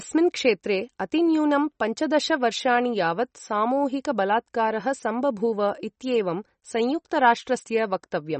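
A speech recording with MP3 compression damage that is plainly audible from start to finish. Nothing sounds above about 8.3 kHz, so the top end is dull and s sounds lack air. Weak detail has a watery, swirling quality. This is likely heavy MP3 encoding, which fits a low bitrate around 35 kbps. With so few bits, the encoder cuts the treble at a fixed point and drops quiet frequency components, which flicker on and off between frames.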